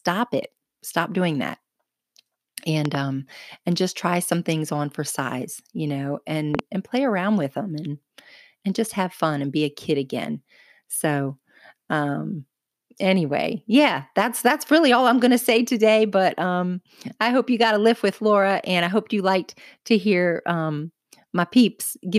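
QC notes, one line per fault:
2.85–2.97 s, loud pop: two sharp pops in quick succession, roughly 15 dB above the speech, which carries on unbroken beneath them. This is likely a voltage step from a plug, switch or static discharge, not a dropout, where the sound itself would briefly vanish.
6.55–6.61 s, loud pop: between "for size you know" and "and play around with", another tight pair of pops, again about 15 dB over the speech. The pulse is likely electrical, added on top rather than a breath plosive.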